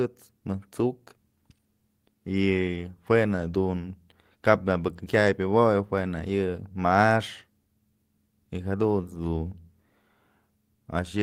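Nothing in this bit of speech gives a listener anything to flag, so there's no technical fault to walk through here.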